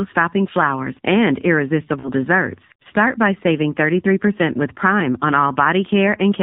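The whole clip has passed through the AMR narrowband mobile codec: speech resampled to 8 kHz and rebuilt from a vocal-tract model with sparse pulse excitation. Nothing above 4 kHz survives, and the plainly buzzy, synthetic timbre fits a low rate around 7.4 kbps.

From 2.00 to 2.10 s, lost AMR speech frames force the decoder to repeat its last good pitch and vocal-tract settings at falling gain. About 40 ms is concealed, consistent with two consecutive frames, heard as a brief smeared warble and dip before the speech returns briefly rough.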